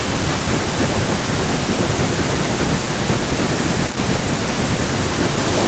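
From 0.00 to 1.39 s and again from 3.61 to 5.57 s there is an echo leak: a fainter copy of the speech trails about 0.29 s and 0.30 s behind, roughly 10 dB down. It is likely an echo canceller that failed to remove loudspeaker pickup. On a spectrogram the harmonic pattern is faintly duplicated, shifted right.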